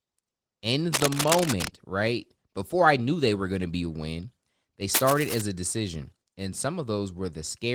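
A worn cable or connector being moved, with its contact resistance jumping rapidly, is the likely source of the two bursts of cable scratch noise in this speech recording. From 0.93 to 1.68 s, just before "right before I knew", and again from 4.94 to 5.42 s, between "be a win they" and "a decision", dense, uneven scratching and rustling lies over the sound at roughly the same loudness as the speech.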